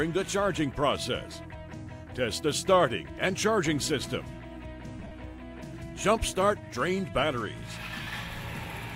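Lost LE Audio frames occur at 4.99 to 5.12 s, with 82.5 ms missing in scattered runs of up to around 40 ms, and again at 8.02 to 8.07 s for 45 ms. Each time, the LC3 decoder refilled the gaps by repeating the last spectrum with randomised signs, so the sound smears into noise.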